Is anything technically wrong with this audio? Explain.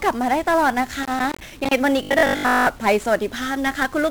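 Yes. Throughout, this speech carries 1-bit DFPWM compression. One bit per sample nudges an adaptive level, and at this heavy setting (consistent with about 48 kbps) broadband fuzz buries the treble. A spectrogram shows a flat noise floor across all frequencies.

From 1.03 to 1.71 s there is loose connector crackle. A contact making and breaking chops the signal into irregular scratching, seen as jagged spikes and dropouts in the waveform.

From 2.03 to 2.69 s the sound turns into a robotic, metallic buzz at 50 Hz. This is likely caused by repeated short buffers: a 20 ms chunk is looped while the real audio is skipped, with roughly seven tenths of the sound repeated. Evenly spaced harmonics at 50 Hz appear on the spectrogram.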